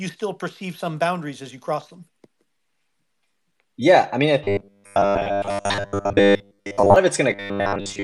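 Robotic sound from repeated short buffers runs from 4.44 to 6.96 s and again from 7.31 s to the end of the speech. Both stretches collapse into a rigid, metallic buzz at 100 Hz that still loosely tracks the talking. The likely cause is audio arriving too late, so playback keeps looping the last 10 ms or so, with most of the real signal skipped, and that repetition imposes the fixed 100 Hz pitch.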